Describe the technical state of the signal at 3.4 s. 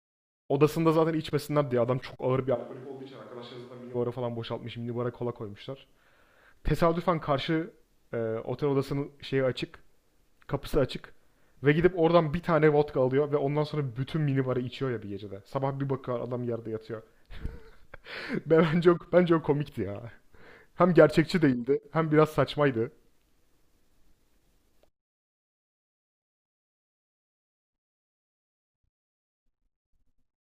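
Switch to a distant microphone, 2.57 to 3.93 s: the speech turns hollow, roomy and thin, drops about 10 dB, and gains background noise, likely from losing the close microphone.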